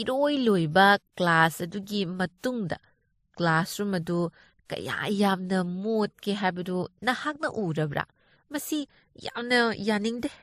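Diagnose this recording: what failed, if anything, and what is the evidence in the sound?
Throughout the speech there are two different layers of codec artefacts heard together, and nothing above 15.2 kHz. At the codec stage this is likely transcoding between lossy codecs, fitting a low-bitrate MP3 around 39 kbit/s re-encoded as WMA around 96 kbit/s.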